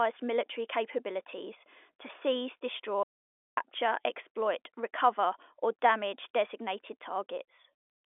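At 3.03 s, just after "military capabilities to seize", the speech stops dead. An audio dropout to silence follows. For 0.54 s there is nothing at all, not even room tone. Sound returns at 3.57 s with "exploit recover or damage". The input was likely lost briefly while the recording carried on writing silence. Whatever was said in that half-second is gone.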